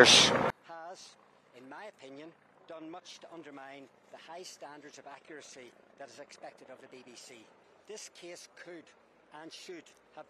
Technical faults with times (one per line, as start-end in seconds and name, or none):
0.50-10.30 one channel inverted